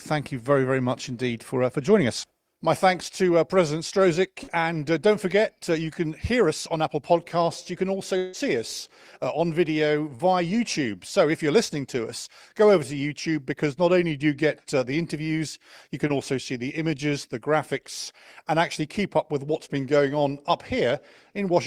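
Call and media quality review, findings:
Short concealed packet loss: brief smears at 4.43–4.49, 10.15–10.21, 16.07–16.11 (between "the interviews you can" and "also see the images") and 19.65–19.69 (after "keep up with what's"). Receiver-side concealment patching 20–40 ms holes by extending the preceding sound.

Long network dropout at 8.17–8.35, just before "us on video". About 160 ms of audio lost, likely a network stall. The jitter buffer never emptied to silence; concealment stretched the last sound as a fading buzz or hiss across the whole gap, then real audio resumed.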